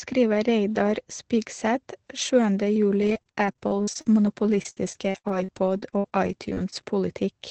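Speech run through a call codec, with the top end stopping around 8 kHz, which fits a wideband Opus setting. From 3.01 to 6.78 s it breaks into repeated packet loss (robotic sound): about twenty short holes, the longest 61 ms, each patched by stretching the previous sound, so it comes out choppy with pieces missing.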